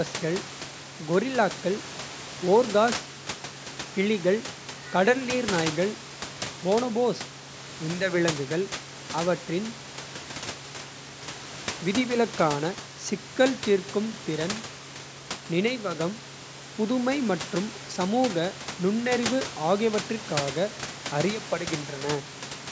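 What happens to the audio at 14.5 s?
Nothing goes wrong at 14.5 s: the speech runs on intact, with only the room noise sitting well below it, about 16 dB down.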